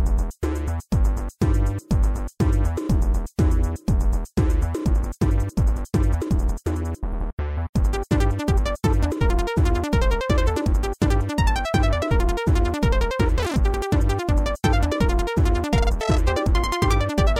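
From 4.80 s to the end, a time-stretched section abruptly runs the sound 1.36 times faster at unchanged pitch, likely from software squeezing it by dropping short pieces. It turns rushed; a spectrogram shows events packed closer while frequency bands stay level.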